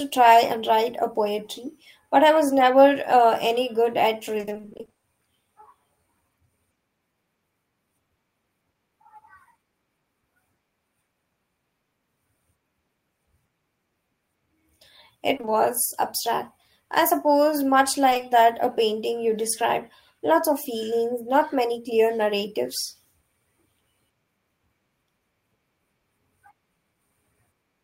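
A speech recording with two kinds of network damage. From 4.37 to 5.05 s, right after "any good at", there is repeated packet loss (robotic sound): 17 separate 20 ms gaps, each patched by extending the preceding sound, so half of that 0.68 s stretch is synthetic fill. The rapid alternation of real and extrapolated audio gives a choppy texture with bits of the sound missing. The 20 ms hole size fits 20 ms packets. Later come short concealed packet losses at 15.37, 15.41 and 15.45 s, and again at 18.09, 18.13 and 18.17 s, the last group between "I suppose much" and "that a painting you". Each event replaces 20 ms that arrived too late or not at all. The decoder carries the last pitch or noise forward and then crossfades back, which leaves brief smears or wobbles over roughly 0.12 s at each of the two spots.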